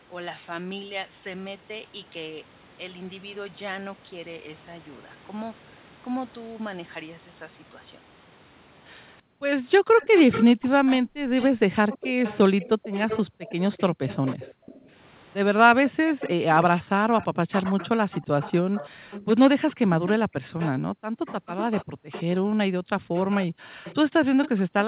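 Speech over a narrowband call, with nothing above 4 kHz. From 9.21 to 14.89 s and again from 15.74 s to the end, the talker's voice repeatedly dips and breaks up, falling by up to about 40 dB and losing roughly 3 s in the first stretch. This is likely speech suppressed in double talk, where the echo canceller attenuates its own talker while the far side is speaking. A delayed copy of the voice trails about 0.33 s behind, at about 10 dB below the speech from 10.0 to 14.79 s, then at about 15 dB below at 16.19–16.31 s, 17.2–20.69 s, 21.26–22.23 s and 23.15 s to the end. This is likely echo leak, where loudspeaker sound picked up by the microphone slips past the echo canceller and is sent back.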